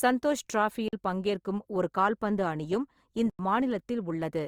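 Throughout the clip the speech has a grainy, rough texture, with tonal parts of the voice turning noisy rather than clean, while the band still reaches up to about 20.2 kHz. This is likely Opus compression in its music (CELT) mode: starved of bits, the encoder keeps each band's energy but fills detail with folded or noise content, and the damage level fits a rate around 24 kbps.

At 0.88 s the sound snaps off into dead silence for about 46 ms, then returns at 0.93 s. At 3.30 s a longer hole of about 93 ms follows, ending at 3.39 s. These are blocks of digital silence, where output samples were left as zeros, most plausibly a late buffer. The lengths fit blocks of 2048 and 4096 samples.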